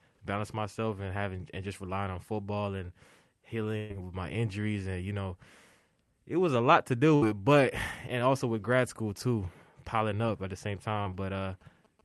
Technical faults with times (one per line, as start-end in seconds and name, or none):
3.77-3.91 burst of packet loss
7.15-7.23 burst of packet loss
10.90-12.04 GSM signalling bursts
11.01-11.07 short concealed packet loss